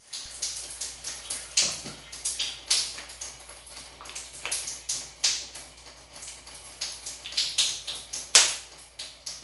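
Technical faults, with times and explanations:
Throughout, MP3 compression: a bit-starved encoder, likely near 48 kbps, cuts everything above 11.3 kHz and drops weak detail, leaving dull, watery, swirling sound.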